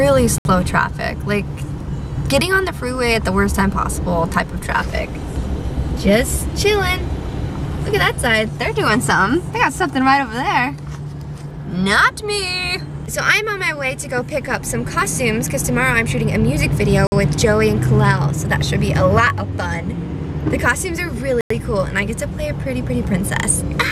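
At 0.38, 17.07 and 21.41 s the sound drops to silence for 68, 51 and 95 ms, then resumes where it stopped. These are likely Bluetooth stalls. Delayed packets let the headphone buffer run empty, so playback waits for the resent data.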